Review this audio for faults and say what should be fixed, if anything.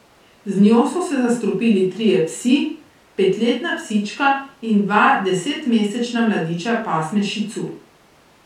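No faults were heard; nothing needs fixing.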